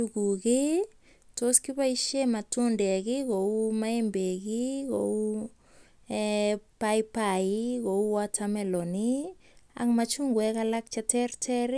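No technical faults are audible.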